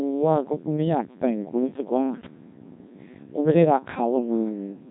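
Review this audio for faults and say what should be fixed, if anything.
Codec 2 vocoder damage runs throughout the speech: it sounds robotic and buzzy because the decoder rebuilds it from sine waves using only pitch, voicing, energy and a spectral envelope. The damage is heavy, nothing sounds above 3.8 kHz, and the thinness fits a rate near 1.6 kbit/s. To prevent it, capture or transmit through a waveform codec at a higher bitrate instead of this low-rate vocoder.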